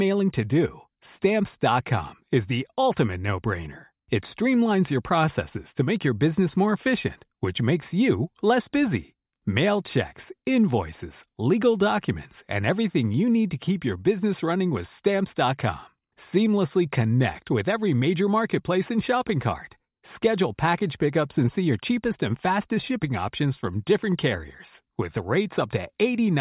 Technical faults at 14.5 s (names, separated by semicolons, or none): none